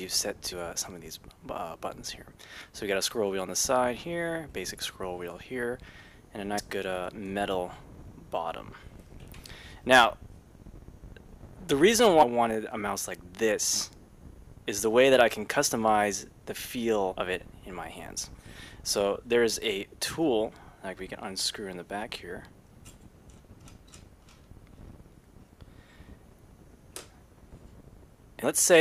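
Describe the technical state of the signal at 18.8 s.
Around 18.8 s the signal is intact, with no dropout, clipping, glitch or other fault audible at that moment.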